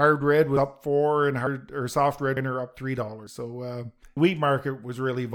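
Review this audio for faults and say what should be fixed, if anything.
Audio missing between chunks at 0.57, 1.47, 2.37, 3.27 and 4.17 s: the speech skips abruptly at each point, with about a tenth of a second gone and the two sides butted together without any gap. The skips fall every 0.9 s, including just before "or soft" and again just after it. The likely cause is a recorder working in 1.0 s chunks that drops a short stretch while closing one chunk and opening the next. To prevent it, capture continuously into an overlapping or double-buffered stream so nothing is lost at chunk boundaries.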